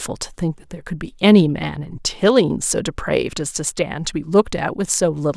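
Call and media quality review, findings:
No defects found on review: the speech signal holds steady level and continuity throughout, with no audible dropouts, discontinuities or processing events attributable to any component in the chain.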